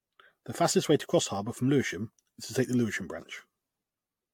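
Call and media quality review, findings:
Generation loss across the whole clip. The speech sounds swirly and hollow, and consonant attacks are smeared. On a spectrogram there is a hard ceiling at 18.9 kHz, with patchy holes and speckled noise in the upper bands. The likely cause is repeated lossy re-encoding, around five passes, fitting AAC-LC near 96 kbit/s. Each pass requantises on a shifted frame grid, so the errors compound.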